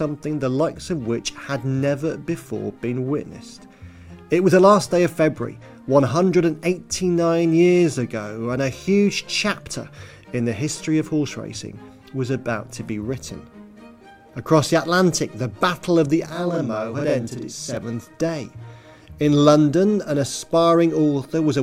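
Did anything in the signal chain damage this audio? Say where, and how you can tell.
Yes. The damage sits at the driver or buffer stage. From 16.30 s to 17.77 s there is a channel delay (doubling). Every sound in that stretch is followed by a second copy at the same level, 40 ms behind. That gap is long enough to hear as a tight slap or double rather than a tonal smear. One channel was held back by a late buffer. The two channels were then summed to mono, so both copies play together.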